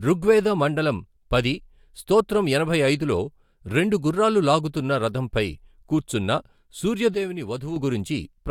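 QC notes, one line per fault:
7.14–7.76 s, sudden gain jump: speech and background noise drop together by about 7 dB at 7.14 s, hold at that lower level, then step back up at 7.76 s, with no fade at either edge. The likely cause is a gain change applied instantly rather than ramped.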